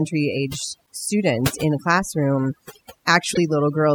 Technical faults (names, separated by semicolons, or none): overdone noise removal; broken MP3 bit reservoir